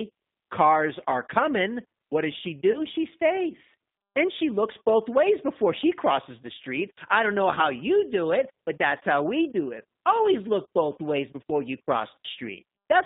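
Throughout, the G.729 codec at 8 kbit/s confines speech to roughly 150 Hz to 3.7 kHz and rebuilds it from a filter and sparse pulses, giving plainly rough, synthetic texture. At 2.72 to 2.80 s and 7.55 to 7.62 s, VoIP packet loss concealed by the speech codec stretches the last sound into a fading buzzy tone or coloured noise, which fits about 20 ms of lost frames, with weak or distorted speech briefly afterward.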